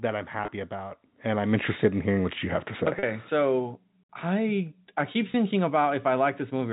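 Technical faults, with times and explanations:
0.38–0.48 s, 2.99–3.03 s and 5.32 s: packet loss with pitch repetition. Short gaps (about 20–40 ms each) get patched by repeating the last pitch period, so you hear a brief held, buzzy tone: just before "about and I'm interested", between "you have to say" and "so I I keep", and right after "so I I keep". It's all through a G.711 telephone path, with nothing above 4 kHz.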